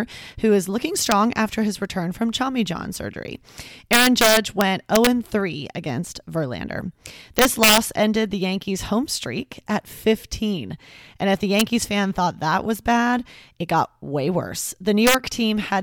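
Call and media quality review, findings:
Integer overflow: violent cracks at 1.12 s (after "who is looking"), 3.93–5.07 s, 7.39–7.78 s, 11.6 s (after "if the") and 15.07–15.15 s, on peaks about 1–4 dB over full scale. The gain or mix stage wraps to the opposite sign instead of saturating.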